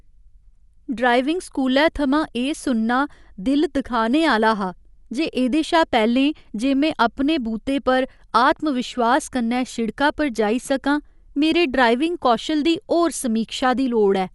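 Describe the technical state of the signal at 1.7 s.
At 1.7 s the speech carries Dolby Digital compression damage, as it does across the whole clip. Nothing reaches above 11.5 kHz, so the top end sounds dull. Quieter spectral detail has turned into a rough, fluttering noise around the voiced tones. This plainly audible damage is likely from an AC-3 style encoder starved of bits, consistent with roughly 64 kbps. The encoder narrowed the band and left many frequency lines unquantised, and the decoder filled them with noise.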